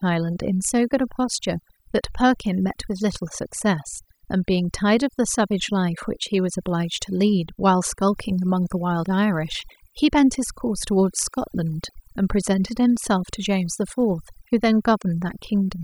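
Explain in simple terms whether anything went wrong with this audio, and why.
Throughout the clip, the pauses drop away and break up into twinkling specks. That is overdone noise removal: a noise reducer set too hard shut off quiet frequency bands, taking soft parts of the voice with the noise.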